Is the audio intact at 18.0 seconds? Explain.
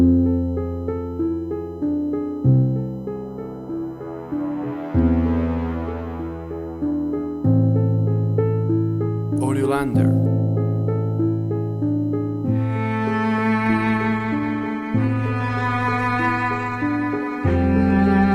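No. An adaptive stream at a lower bitrate takes over from 13.63 s to the end. The connection slowed, so the player switched to a leaner encoding. Codec artefacts rise, with sudden, gapless codec smearing, which fits an Opus stream dropping from 64 to 16 kbit/s. A USB whine also runs throughout: a fixed 1 kHz tone, about 45 dB below the signal, from current drawn in 1 ms bus frames leaking through power or ground.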